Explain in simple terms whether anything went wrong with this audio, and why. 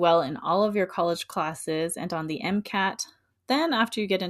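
Nothing went wrong with this speech recording; there are no faults to explain.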